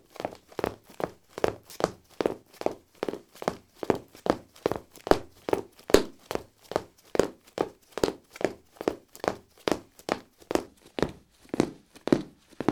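From 10.67 s to the end, a section at the wrong speed runs at 0.78x, slower and about four semitones lower, likely from clock mismatch.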